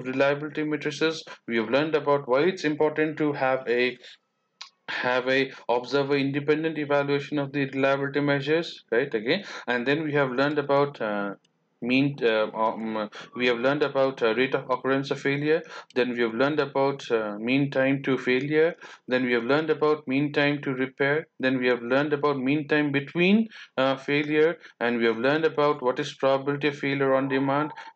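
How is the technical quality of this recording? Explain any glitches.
No glitches turn up anywhere in the recording. Nothing in it calls for a technical explanation.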